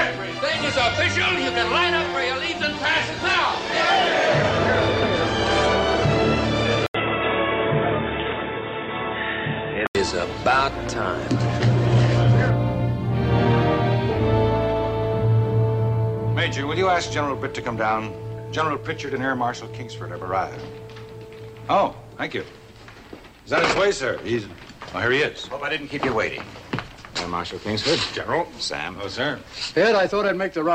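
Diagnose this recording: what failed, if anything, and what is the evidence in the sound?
From 6.86 to 9.95 s the sound turns narrow and boxy, with an 80 ms silence at the switch, then clears again. This points to an input switched to a poorer device, likely at the driver or routing stage. On a spectrogram, everything above 3.8 kHz disappears for that span and a new noise floor appears, roughly 35 dB below the signal. The waveform level stays about the same.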